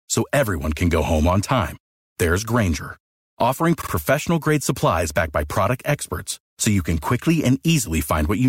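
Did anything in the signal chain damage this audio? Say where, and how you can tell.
Yes. At the codec or storage stage, a short run of compressed frames was written twice over, so the decoder plays the same stretch of speech again. Between 3.80 and 3.91 s, just before "grade supplies backed by", a fragment of about 52 ms is heard two extra times, which points to a two-frame block being repeated. This is a repeated-frames fault. It sounds like a quick stutter, and it stretches the clip by about 105 ms.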